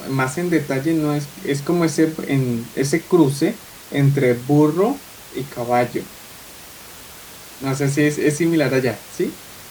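Nothing in this speech recording points to a technical problem, just some room noise sitting about 21 dB below the talking, which belongs to the space rather than the system.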